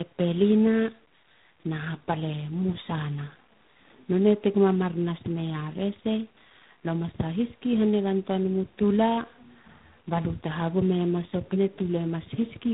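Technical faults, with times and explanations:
throughout, tandem speech coding: the speech has that layered roughness and warble you get when a call passes through two low-rate speech coders in a row, each one re-encoding the previous one's artefacts. It fits an AMR-NB leg at 7.4 kbit/s, a G.711 hop, then G.726 at 24 kbit/s. The band stops around 3.8 kHz, which accounts for the muffled, boxy edge, and the stacked coding errors make it grainier than either coder alone.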